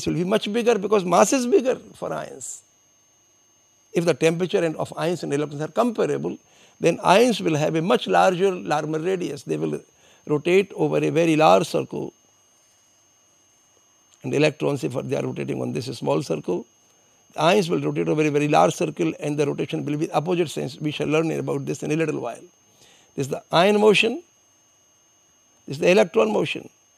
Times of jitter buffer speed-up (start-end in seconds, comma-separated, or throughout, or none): none